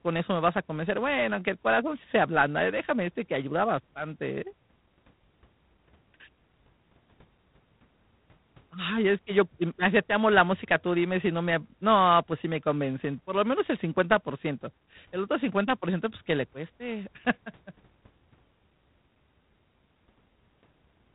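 A harsh, rasping hiss rides on the speech from start to finish, swelling and fading with its loudness, and nothing sounds above 3.9 kHz. That is G.726 ADPCM damage: too few bits code each sample's prediction error, which fits the 24 kbit/s rate.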